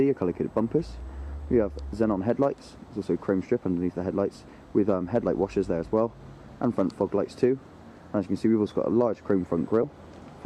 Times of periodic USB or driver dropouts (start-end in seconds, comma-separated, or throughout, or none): none